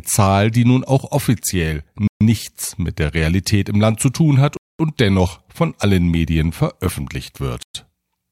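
Speech cuts to silence three times: 133 ms at 2.08 s after "die nun auch offiziell", 223 ms at 4.57 s after "zu tun hat", and 119 ms at 7.63 s. Playback then resumes. This is likely a Bluetooth stall, with held-up packets draining the headphone buffer.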